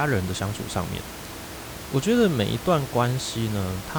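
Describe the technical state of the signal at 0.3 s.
At 0.3 s the signal is intact, with no dropout, clipping or other fault, and the only thing beneath the speech is the room's own background noise, sitting about 13 dB below it as part of the recording.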